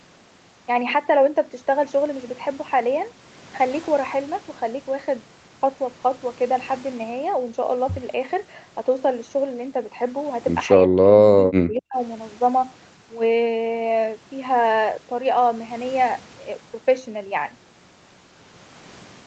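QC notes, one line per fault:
10.76–11.98 s, speech suppressed in double talk: the speech drops by about 30 dB for roughly a second. This is likely the echo canceller failing to separate the near-end talker from the overlapping far-end echo and attenuating the near-end talker along with it.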